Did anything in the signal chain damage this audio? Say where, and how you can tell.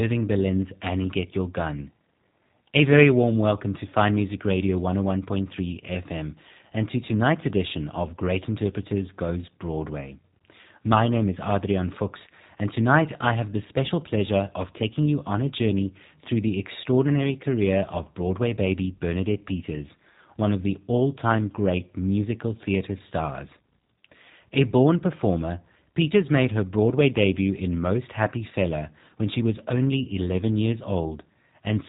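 Yes. G.729 codec damage runs throughout the speech, at the codec stage. Nothing passes above 3.8 kHz, and voices sound rough and slightly synthetic, which fits an 8 kbit/s rate: each short frame is rebuilt from a vocal tract filter, a pitch predictor and a few pulses.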